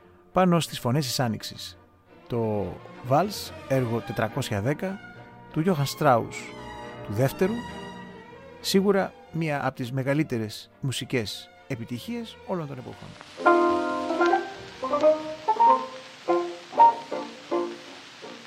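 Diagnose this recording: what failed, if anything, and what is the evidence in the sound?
Nothing failed here as far as I can hear, since the recording runs steady all the way with no sign of trouble at any stage of the chain.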